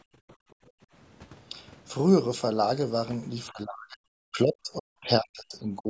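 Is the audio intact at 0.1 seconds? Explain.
No. From 0.02 to 0.87 s the echo canceller, reacting to loudspeaker playback, clamped the microphone hard. This is background gated by the echo canceller: the room sound sinks by up to about 35 dB for around 0.7 s, then returns once the canceller releases.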